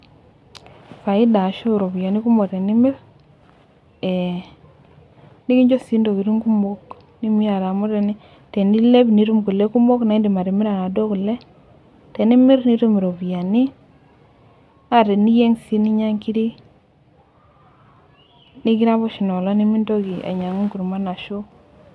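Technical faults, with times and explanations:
No technical faults detected.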